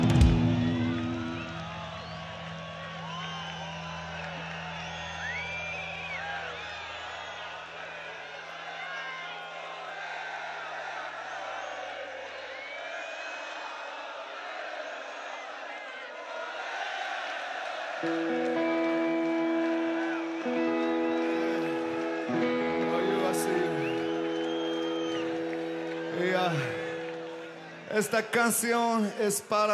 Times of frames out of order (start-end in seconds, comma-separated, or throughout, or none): none